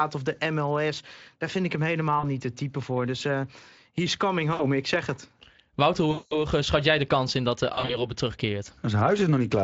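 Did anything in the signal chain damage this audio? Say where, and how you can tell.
Yes, at the network stage: VoIP packet loss concealed by the speech codec. Gaps at 2.19–2.34, 4.53–4.68, 6.11–6.36 and 7.73–8.08 s smear into fading buzz. The decoder extends its last pitch and filter while lowering gain. The 200 ms gap at 6.11 s sounds worst.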